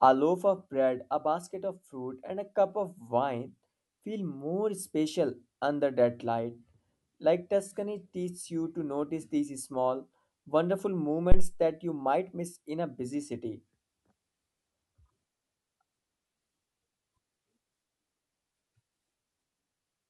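At 11.32 s, just after "notice these small wonderful", a supply such as phantom power switched on or off on the live input, and the sudden voltage step passed through the coupling capacitors. The result is a phantom power thump: a deep, low thud peaking at about -8 dBFS that decays within 48 ms, with the disturbance settling by 11.53 s, before "that you might miss".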